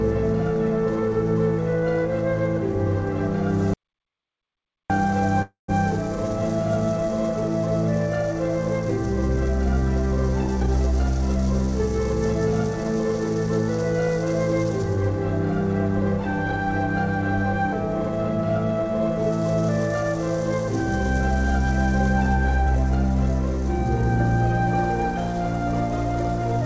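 A call recording whose bandwidth stops at 8 kHz, which fits a wideband call codec such as G.722 at 64 kbps. From 3.74 to 4.90 s there is an audio dropout to silence: about 1.16 s of silence with no room tone, likely from input loss while recording continued, so that material is gone. At 5.42 to 5.70 s a call audio freeze stretches the last sound into a decaying fill of about 264 ms, ending in roughly 140 ms of silence; playback then resumes where it stopped, adding delay without losing content. From 10.57 to 10.93 s a jitter buffer speed-up plays the audio at about 134% speed with unchanged pitch, cutting around 150 ms of pitch-period slices to drain excess buffering.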